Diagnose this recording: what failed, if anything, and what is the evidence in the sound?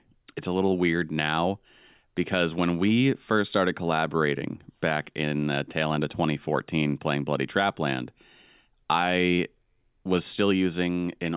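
Nothing failed in this recording, and nothing in the sound points to a fault at any stage.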